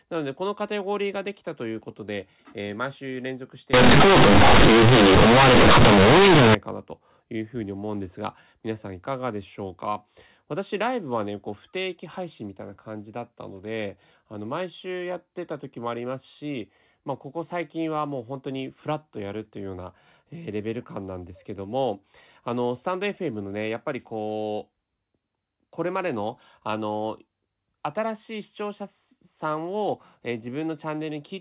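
From 3.74 to 6.55 s, the speech turns into loud, harsh buzz with heavy noise in the pauses. This is companded audio read as linear. Mu-law bytes were played as plain 8-bit samples without expansion. Quiet passages now swing as hard as loud ones.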